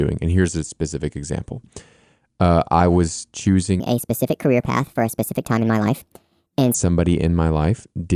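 From 3.80 s to 6.74 s, just after "uh I was", the speech has a wrong sample rate fault. Audio recorded at 22 kHz is played back at 32 kHz without conversion, so it runs 1.45 times fast. Pitch rises by about 6.5 semitones, making the voice high and hurried.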